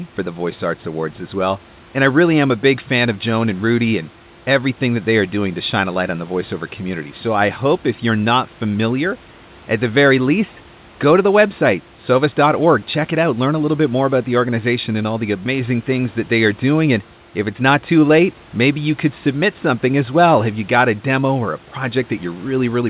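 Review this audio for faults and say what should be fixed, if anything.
No faults found; nothing needs fixing.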